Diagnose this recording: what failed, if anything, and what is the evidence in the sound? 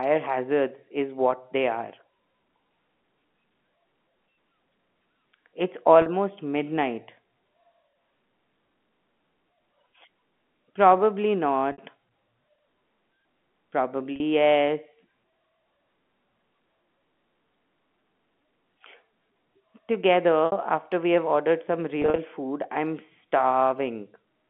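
Network stage: packet loss with pitch repetition. Held, buzzy patches of 40 to 60 ms appear at 6.02, 11.72, 14.16 and 20.46 s, with scattered gaps over 160 ms from 22.02 s. The receiver repeats the last pitch period across each gap instead of leaving silence.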